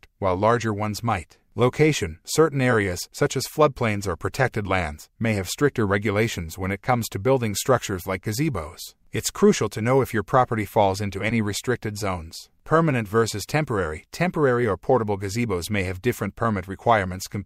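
No technical faults are audible.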